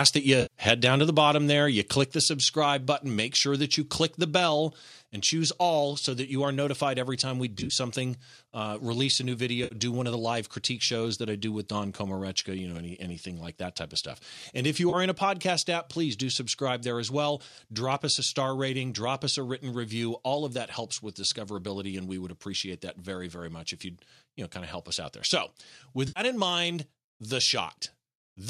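At 0.06–0.08 s and again at 0.68–0.86 s the loudest peaks are flattened, about 4 dB over the converter's limit, giving a harsh, crackling edge. This is likely microphone overload: the waveform shows squared-off tops, and the spectrogram shows a brief smear of broadband energy.

From 0.42 to 0.54 s there is AAC frame loss with concealment. About 90 ms of audio is missing and the decoder has filled the gap by repeating the last good spectrum, which sounds like a smeared, phasey patch. On the spectrogram, the harmonics blur into a flat, grainy block.

At 1.02 s the level drops by about 2 dB, and at 2.04 s by a further 3 dB. Speech and background step down together. This is likely the microphone volume stepped down by the call software after those overloaded peaks, and the waveform envelope shows it as a sudden, lasting step down.

More concealed AAC frame losses follow at 7.58–7.73 s, at 9.64–9.75 s, at 14.90–14.95 s and at 26.08–26.20 s. 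They are heard as short noisy, smeared gaps lasting roughly 30–80 ms. The one near 7.6 s is broken into several runs, none longer than about 30 ms. All of them sit over the light graininess of what is likely low-delay AAC compression.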